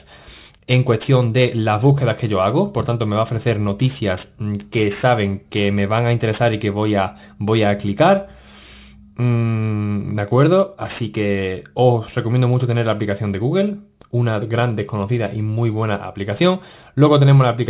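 Throughout the clip, the sample rate was lowered without an anti-aliasing filter, which points to a drop to 8 kHz. Content above the 4 kHz fold point mirrors back as aliasing, about 25 dB below the signal, giving sibilant and bright sounds a gritty, metallic edge.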